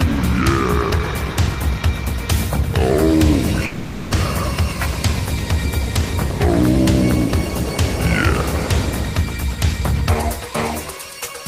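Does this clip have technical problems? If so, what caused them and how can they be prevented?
Yes. Incoming audio likely stopped arriving from 3.65 to 4.13 s, a long network dropout. The receiver covered the gap by stretching the last sound into a fading buzz or hiss for 460 ms, then resumed later, without the lost portion. A steadier connection, with redundancy or retransmission in the stream, helps prevent this.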